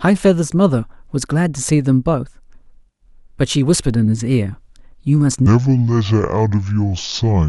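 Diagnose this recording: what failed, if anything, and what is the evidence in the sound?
A section at the wrong speed from 5.46 s: 0.625 times, likely a playback clock mismatch. Pitch falls and tempo slows together, unlike a pitch shifter.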